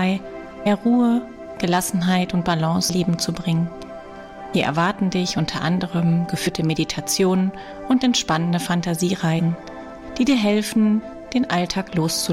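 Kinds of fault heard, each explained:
compressed frames skipped: Whole blocks of the coded audio never reach the output, so the sound leaps forward. There are seven, at 0.65, 2.88, 4.53, 6.46, 7.71, 9.38 and 11.01 s. Most drop roughly a tenth of a second. The one at 2.88 s loses about half a second. The jump sizes fit frames of about 23 ms.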